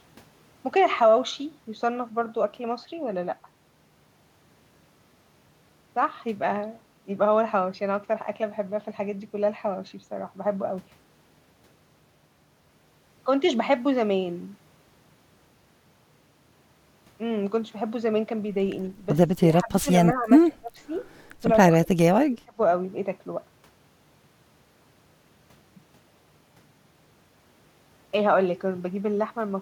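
An echo canceller that likely could not tell this talker apart from the far end's loudspeaker echo clamped down on the speech during double talk. Speech suppressed in double talk first appears at 19.34–19.45 s as a deep cut of around 35 dB. Shallower dips follow at 19.61–19.88 s and 20.14–20.30 s. Deep gaps of about 30 dB come at 20.47–20.72 s, 21.87–21.97 s and 22.28–22.59 s, so the speech drops out in short pieces.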